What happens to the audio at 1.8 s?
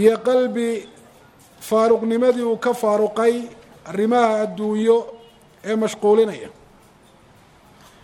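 Nothing goes wrong at 1.8 s; the audio plays through that moment intact, with no dropout, click, glitch or other fault.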